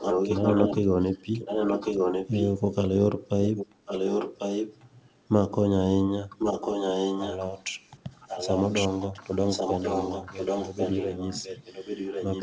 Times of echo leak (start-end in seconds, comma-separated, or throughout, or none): 0.00-2.54, 3.44-4.86, 6.38-12.42